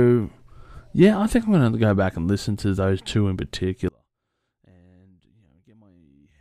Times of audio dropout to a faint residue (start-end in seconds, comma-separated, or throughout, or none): 3.88-6.41